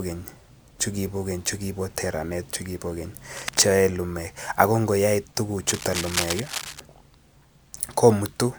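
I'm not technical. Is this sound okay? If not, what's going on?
No. Twice, a rough scratching, rustling noise sits on top of the speech: first from about 3.37 to 3.68 s, just after "teranet chukibo keny", and again, louder and longer, from about 5.67 to 6.80 s, after "yoe lumeek ak ngoyoe". This is cable scratch noise. It is likely caused by a worn cable, plug or control being moved, so its electrical contact keeps flickering and spits out bursts of crackly noise.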